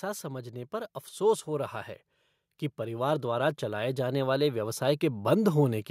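From 2.76 s to 5.86 s the level climbs steadily, an automatic gain rising by about 8 dB over roughly three seconds. The gain control judged the input too quiet and kept turning itself up, so the speech and the background noise swell together rather than the speech alone getting louder. On a waveform the envelope widens smoothly across that span; on a spectrogram every band, including the noise floor between phrases, brightens evenly.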